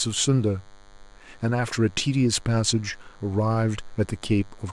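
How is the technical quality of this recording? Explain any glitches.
The recording carries a persistent interference fault that runs under the speech for its whole length. A DECT cordless phone buzz is present from start to finish, sitting roughly 30 dB below the speech. A nearby DECT handset or base sends a short radio burst every 10 ms, and the audio circuitry rectifies those bursts, producing a thin, rasping 100 Hz buzz dense with harmonics. Unlike mains hum, which is rounder and centred on 50 or 60 Hz, this has a gated, buzzy edge that stays constant regardless of the speech.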